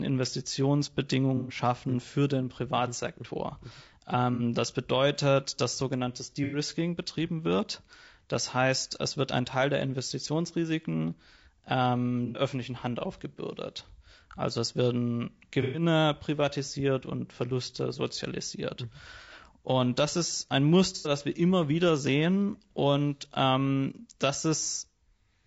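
Throughout the speech, the encoder was likely the low-delay AAC of video calls, AAC-ELD, at a rate that points to about 32 kbps. Its short frames resolve pitch harmonics poorly, so the sound turns rough and grainy, with noise filling between harmonics and a thin, synthetic top band.

AAC frame loss with concealment occurs at 1.37 s (before "für den"), 4.34 s (before "das bedeutet dass sogenanntes"), 6.44 s, 12.26 s, 15.62 s, 19.22 s and 20.96 s (between "das ist ein" and "wir immer wieder sehen"). At each, the decoder filled missing frames from the last good spectrum for 60 to 120 ms, leaving a smeared, noisy, phasey patch.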